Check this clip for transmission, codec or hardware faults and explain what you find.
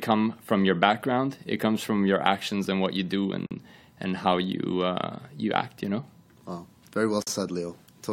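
Two short dropouts break the speech at 3.46 s and 7.22 s, each about 45 ms long. These are gaps at a join of encoded pieces: separately encoded segments were spliced untrimmed, leaving encoder delay and end padding as silence with smeared edges. Speech then resumes where it stopped.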